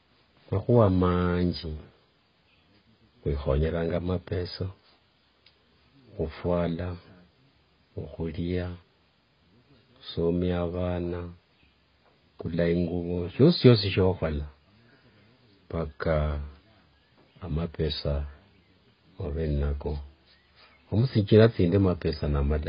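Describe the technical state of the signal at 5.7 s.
AAC compression affects 5.7 s, as it does the whole clip. The speech is heavily dull and smeared, with fizzy, warbling sibilants and nothing above 5.1 kHz. The likely cause is AAC-LC at a bitrate around 16 kbps, coarsely quantising each frame's spectrum and discarding the upper bands.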